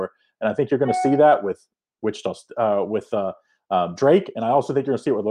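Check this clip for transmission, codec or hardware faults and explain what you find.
No transmission, codec or hardware problems can be heard here.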